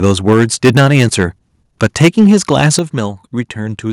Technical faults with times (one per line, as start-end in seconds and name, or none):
0.03-1.25 microphone overload
0.33 microphone volume stepped down
1.82-2.79 microphone overload
2.79 microphone volume stepped down